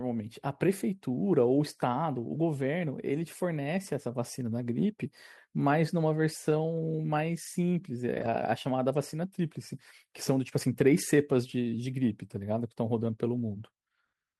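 Speech, and there's one rough patch between about 8.13 and 8.35 s: a lost packet rebuilt from error correction. Several separate packets didn't arrive, but the packets after them carried low-bitrate backup copies, so the decoder played those and never left a gap. What you hear instead is roughly 120 ms of audio that sounds coarser and noisier. That length fits a handful of 20 ms packets being patched from those lower-quality copies.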